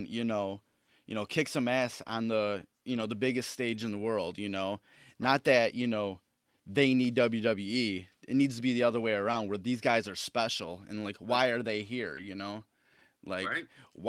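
At 2.03 s the speech has a short concealed packet loss. About 20 ms of audio never arrived in time. The receiver filled the gap by extending the preceding sound, from its pitch if voiced or as shaped noise if not, and then blended back into the real signal. It comes across as a brief smear or wobble.

From 2.07 to 2.13 s, 40 ms of lost packets were rebuilt from error correction. Each following packet carried a low-bitrate copy of the missing audio, and the decoder played those copies. There is no gap, but the rebuilt stretch sounds rougher and noisier.

The same thing happens from 2.89 to 3.03 s, just before "the biggest", covering 80 ms. It happens again from 3.73 to 3.83 s, covering 60 ms, between "the biggest" and "in the world you". Each of these is a coarser, noisier patch.

From 9.31 to 9.35 s, between "be the other way" and "where these guys are", a 20 ms concealed loss overlaps a 20 ms stretch rebuilt from error correction, starting at 9.33 s. 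The result is a brief smear that turns rough at its end.

From 12.15 to 12.19 s the same pairing recurs. A 20 ms concealed loss is joined by a 20 ms stretch rebuilt from error correction, starting at 12.17 s.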